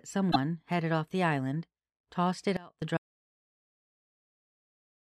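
At 0.30 s the audio jumps forward and garbles briefly. The disturbance lasts until 0.36 s, just before "headed off the island". Its length fits about two MP3 frames of 26.1 ms each. The likely cause is a broken MP3 bit reservoir. Frames were cut out of the stream. The frames after the cut then reached back for borrowed data and found the wrong bytes. That produces the short garble heard here.

At 2.57 s, right after "the island tossed it", a sudden gain jump occurs. The level falls by about 22 dB in a single step, with no fade. Speech and background drop together, so the whole signal shrinks at once. It stays quiet until 2.82 s, then returns just as abruptly. A gain setting applied and removed without a ramp is the likely explanation.

From 2.97 s to the end of the clip, the audio drops out to silence. Speech stops mid-flow. The gap is silent, with no room tone or hiss underneath. That points to lost input, such as a disconnected device or failed link, while recording continued writing silence. 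Whatever was said during this stretch is gone.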